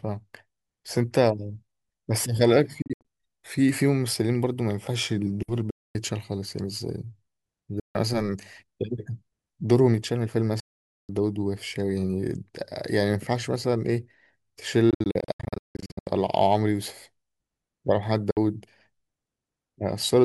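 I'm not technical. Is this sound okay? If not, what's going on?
No. The speech briefly cuts to silence, then picks up further along, like it kept playing. That's a Bluetooth dropout, likely audio not reaching the headphones in time. It happens at 2.82–3.05 s (a few quick gaps), 5.70–5.95 s, 7.80–7.95 s, 10.60–11.09 s, choppy from 14.90 to 16.07 s, and 18.31–18.37 s.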